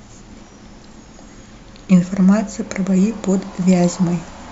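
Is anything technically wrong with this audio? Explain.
No, nothing technically wrong can be heard in this speech recording.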